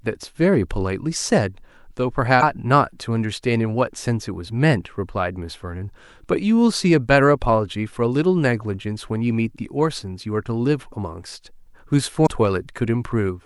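Speech with damaged data in a compressed stream. At 2.39 to 2.43 s and 12.23 to 12.27 s, a brief glitch cuts through. Corrupted bytes make the decoder misread those frames. It loses sync and hunts for the next frame header.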